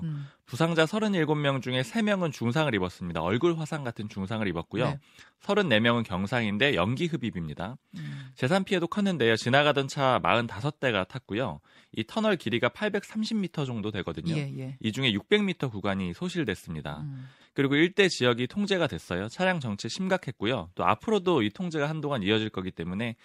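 Speech, with no technical faults to be heard.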